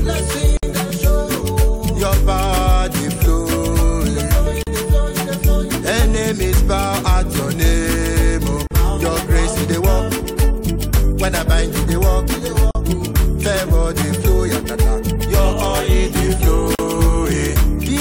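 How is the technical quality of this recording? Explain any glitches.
The recording is marred by regular dropouts. A gap at a join of encoded pieces occurs at 0.57 s (57 ms), then at 4.63, 8.67, 12.71 and 16.75 s (each about 40 ms), spaced roughly 4 s apart. The audio was encoded in separate blocks and joined untrimmed, so each block's leading encoder delay and padded final frame remain as silence. The continuous sound cuts out abruptly, with smeared edges, then resumes exactly where it stopped.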